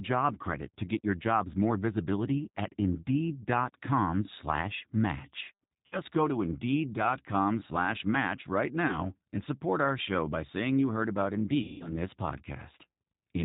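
Throughout the clip the G.729 codec at 8 kbit/s leaves plainly audible damage to the speech. The codec rebuilds each 10 ms frame from a vocal tract filter, a pitch predictor and a few excitation pulses, and it passes nothing above 4 kHz. The result is a rough, slightly synthetic voice. A simple low-pass filter would only muffle the sound without this buzzy, pulse-built roughness.

At 5.86 to 5.99 s, after "slash match" and before "go to", there is VoIP packet loss concealed by the speech codec. About 60 ms of audio is missing, which fits three lost 20 ms packets. The decoder stretches the last sound into a buzzy tone or coloured noise that fades instead of leaving silence, and this is what sets it apart from a plain dropout.

At 8.88 to 9.09 s, after "slash match right" and before "and support our show", only about 20 ms is lost, consistent with a single packet. The roughness still lasts about 0.2 s because each frame is built on the previous one, so the decoder needs time to recover.

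At 11.62 to 11.96 s, after "saying you heard about", about 180 ms is lost, likely nine consecutive packets. The concealed sound fades away before the speech comes back.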